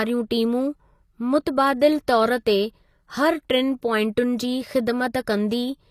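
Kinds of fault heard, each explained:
HE-AAC compression: The top end sounds bright but synthetic, which points to a likely HE-AAC encode at a low rate, roughly what you'd expect around 24 kbps. The codec keeps only the lower spectrum properly and fakes the treble by copying lower bands upward under a rough envelope, so the speech's s sounds come out gritty and metallic, the damage is plainly audible, and there's nothing at all above about 14.9 kHz.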